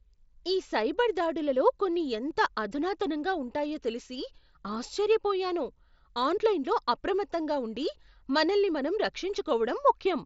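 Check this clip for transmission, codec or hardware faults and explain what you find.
Nothing in here sounds like a fault, just speech coming over a Bluetooth mSBC headset link with its usual top end that stops around 7.7 kHz.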